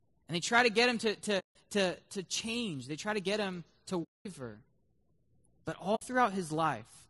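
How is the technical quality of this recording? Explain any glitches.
The recording is speech with plainly audible coding damage throughout, plus three short dropouts where the sound fades to silence and back.

Low-delay AAC compression, throughout: the voice sounds rough and grainy, likely from AAC-ELD at 32 kbps, whose short frames resolve pitch harmonics poorly and leave noise between them.

AAC frame loss with muting, at 1.39 to 1.56 s (after "to get him to", before "to to change they"), 4.03 to 4.26 s (after "to get him to"), and 5.95 to 6.03 s: lost frames are zeroed, so overlapping windows fade into soft-edged holes of about 160, 220 and 60 ms.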